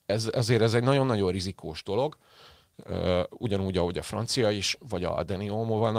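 Speech recording with no audible technical faults.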